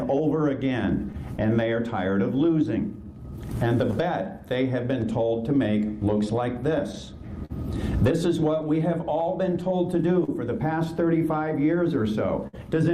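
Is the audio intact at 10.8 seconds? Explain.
No. Clock drift between sender and receiver runs through the whole clip. The sender's clock is roughly 4% slow, so the receiver's buffer keeps draining. Repeated timing corrections span 0.12 to 12.04 s, covering 10.8 s. The receiver stretches the sound to 98% speed, adding about a third of a second overall.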